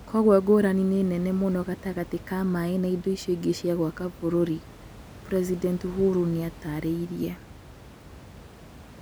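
Nothing goes wrong technically in this speech recording; the only other sound is the ordinary background noise of the room, sitting about 20 dB below the speech.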